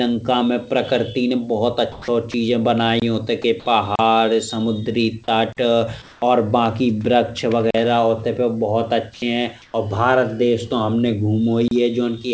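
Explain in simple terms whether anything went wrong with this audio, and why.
Several things went wrong, in three kinds of fault.

In the pauses at 1.92–2.08 s, 6.02–6.22 s and 9.62–9.74 s, the room's natural background briefly turns into a flat, even hiss. This is comfort noise in place of the background. The call likely stopped sending during silence, and the receiving end filled the gap with made-up noise.

At 2.32–2.34 s and 9.14–9.22 s, a small piece of the speech itself vanishes and the same smooth hiss takes its place. This is sound dropped by the voice detector: the detector likely mistook part of the sound for background and cut it.

At 3.95–3.99 s, 5.53–5.57 s, 7.71–7.74 s and 11.68–11.71 s, the audio stops dead for about 30 to 45 milliseconds. Each is a block of digital silence, likely where the program failed to deliver audio in time and left silence instead.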